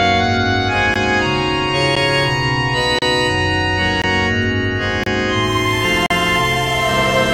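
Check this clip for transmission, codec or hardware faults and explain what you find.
The music has gaps between stream segments: short hard-edged silences at 0.94 s, 1.95 s, 2.99–3.02 s, 4.02–4.04 s, 5.04–5.06 s and 6.06–6.10 s, roughly once per second, matching 1.0 s segments whose time stamps leave a small hole the player fills with silence. Unlike a packet dropout, nothing is missing: the music resumes exactly where it stopped.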